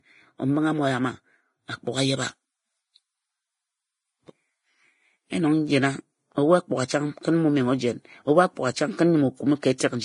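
From the start the speech sounds heavily hissy and grainy, with roughened tones, blurred attacks and nothing above 10.6 kHz. That's likely Vorbis compression at a low bitrate, around the high twenties of kbps, quantising the treble so coarsely that its detail turns to noise.

Then from 1.92 s to 5.38 s you get pre-emphasis left on. The treble boost, which fits the CD 50/15 µs curve, was never undone, so 10 kHz sits about 8 dB hot against 1 kHz, and that stretch sounds thin, bright and sibilant.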